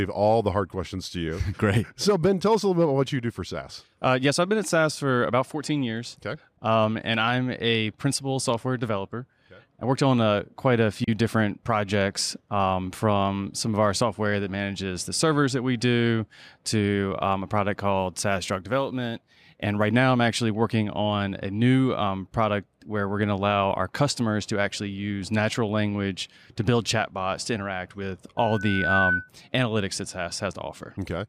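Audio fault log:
17.99–19.89 s, sample clock jitter: between "to um a product" and "now I'm actually working", the converter's clock wanders by a few microseconds, so samples land slightly off time. The error sits roughly 35 dB below the speech and adds a hissy roughness that is strongest on loud, bright sounds.
28.37–29.29 s, loudspeaker feedback squeal: after "chatbots to interact with", the microphone picks up its own loudspeaker and the loop gain exceeds one at 1.5 kHz. That tone swells over about half a second into a squeal about 5 dB above the speech, then stops before "analytics that".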